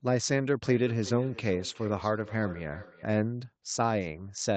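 From 0.64 to 3.37 s a feedback echo between two devices runs through the speech: a second device in the same room is replaying this microphone's signal, and the microphone picks it back up, which this microphone's own echo canceller has no way to remove. Each phrase returns roughly every 0.4 s, thinner and more ringing, at its loudest about 17 dB below the speech. It sits on audio already band-limited to 8 kHz by the call path.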